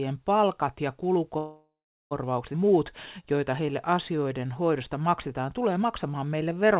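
Speech carried over a narrowband call path, where the G.711 A-law coding leaves nothing above 4 kHz. A spectrogram shows a flat ceiling there throughout, with the codec's usual layer of coding noise. Right after "palkat ja", a call audio freeze runs from 1.38 to 2.13 s. The last sound is drawn out as a fading buzz or hiss, then gives way to about 360 ms of dead silence. On a spectrogram this looks like smeared, repeating bands that thin out into an empty gap, and on a waveform like a decaying envelope dropping to a flat line. The likely cause is packets held up in transit until the jitter buffer ran dry. When they arrive, the speech resumes where it stopped, so nothing is lost, but about 728 ms of delay has been inserted. At 2.53–2.56 s a skip ahead follows: roughly 0.4 s of speech is dropped, and the two sides are butted together with only a tiny bridge. This shows as an abrupt discontinuity in the waveform and a sudden change in the harmonic pattern. 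From 2.64 to 6.73 s a jitter buffer slow-down rebuilds the reserve by repeating single pitch periods many times, adding about 331 ms. Speech plays at 92% speed with unchanged pitch, so sounds stretch. On a spectrogram, harmonic stretches look elongated, and the waveform shows runs of identical cycles.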